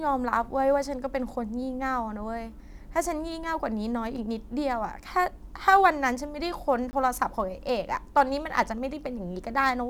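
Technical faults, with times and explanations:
4.16 s, block of digital silence: a gap of under 2 ms drops to zero and back without a fade, heard as a tick; the waveform shows a flat notch with a thin vertical spectrogram stripe.
6.91–6.93 s, block of digital silence: 20 ms of zeros cut in abruptly, likely from an unfilled output buffer, giving a short hole; the waveform goes flat and the spectrogram shows a blank column edged by broadband lines.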